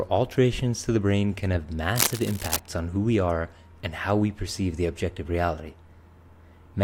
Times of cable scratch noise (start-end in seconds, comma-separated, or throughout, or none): 1.95-2.60